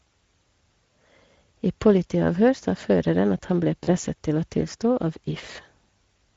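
The whole clip carries Speex codec damage, and it is plainly audible. Speex is a CELP speech codec. It rebuilds speech from a filter and a coded excitation. The grain heard here points to a middle rate, near 17 kbps. At that rate the excitation is coded coarsely. So the speech sounds noisy and somewhat hoarse from start to finish.

VoIP packet loss concealed by the speech codec comes next. It first occurs from 3.83 to 3.89 s, right after "føreren at han ble". The gap fits about 40 ms of missing audio, or two 20 ms frames. The decoder fills it by repeating its last pitch and filter with falling gain. The result is a brief stretched tone or coloured noise that fades. The voice stays weak or distorted for tens of milliseconds as normal packets resume.

The second loss falls at 5.53 to 5.57 s, after "å tilstå av". It fits a single lost 20 ms frame. The same concealment gives a shorter fading blur, and the voice stays weak or distorted for a moment after.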